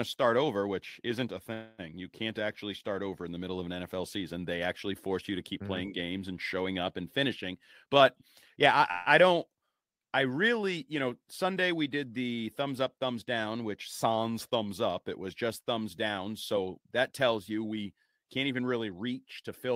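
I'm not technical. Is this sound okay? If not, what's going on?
No. There are two call audio freezes, at 1.53–1.81 s after "over which isn't a" and 8.91–9.08 s before "I I don't", where the sound stalls into a fading buzz, likely from delayed packets, then resumes with nothing lost. A jitter buffer speed-up at 7.52–8.81 s and 16.52–17.94 s, between "was just thumbs down" and "can't even", plays the speech about 14% faster at the same pitch, trimming roughly a fifth of a second each time to catch up on the delay.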